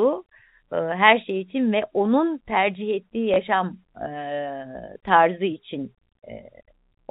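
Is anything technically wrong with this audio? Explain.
Yes. At 3.34 s, just after "ve onun tercih ettiği", the speech gives a small blip. This is packet loss with last packet repeated. A single 20 ms packet went missing, and the receiver filled the gap by replaying the previous one. The replay's edges seldom line up with the pitch cycle.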